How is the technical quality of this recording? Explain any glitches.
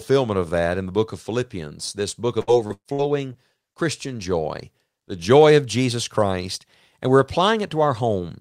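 One stretch of the speech is damaged. From 2.41 to 3.36 s there is repeated packet loss (robotic sound). Several short holes, the longest about 120 ms, are bridged by stretching the last sound, so roughly a quarter of that span turns choppy. Unlike a single dropout, the holes recur in quick succession.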